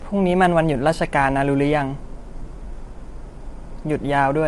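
A speech recording with low-delay AAC compression damage running through the whole clip, clearly audible from start to finish. The voice sounds rough and grainy, with noise filling the gaps between pitch harmonics, and nothing is present above about 11.5 kHz. The likely cause is an AAC-ELD encoder: its short frames resolve voice harmonics poorly and use up bits quickly, and the degree of damage fits a rate near 32 kbps.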